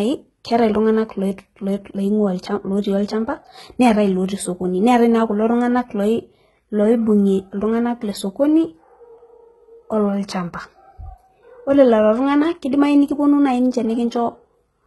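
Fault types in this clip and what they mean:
HE-AAC compression: speech treble sounds synthetic and gritty, with lispy s sounds and nothing above 11.8 kHz, likely from heavy low-bitrate band replication rebuilding the highs.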